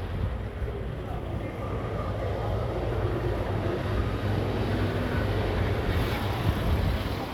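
No technical faults can be heard anywhere in this recording of sounds. Nothing in it breaks, drops out or shifts from one moment to the next.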